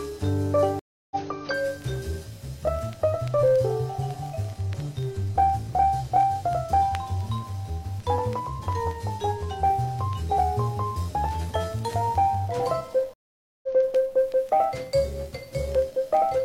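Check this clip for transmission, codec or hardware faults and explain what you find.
Two stream reconnect faults. From 0.79 to 1.16 s the sound drops out for 315 ms, and from 13.14 to 13.67 s for 494 ms. Each time it comes back slightly ahead, skipping roughly a fifth and then a third of a second. The connection broke, playback went silent, and after reconnecting a fresh decoder rejoined the live stream further along.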